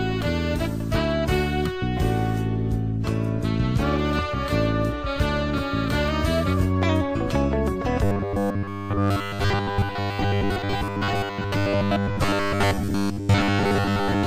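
From 8.04 s to the end, the sound turns into a rigid metallic 100 Hz buzz, robotic sound from repeated short buffers. A roughly 10 ms block is likely being replayed over most of the gaps. This shows as evenly spaced harmonic stripes on a spectrogram and identical repeating cycles in the waveform.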